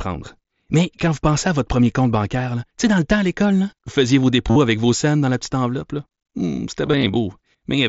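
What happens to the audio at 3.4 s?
Nothing goes wrong at 3.4 s; the speech passes through that moment intact, carried by the Bluetooth mSBC headset link as usual.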